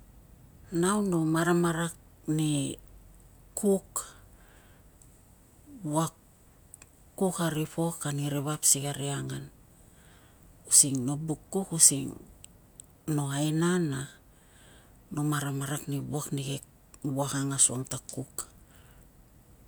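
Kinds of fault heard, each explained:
No faults detected; nothing in the signal path calls for attention.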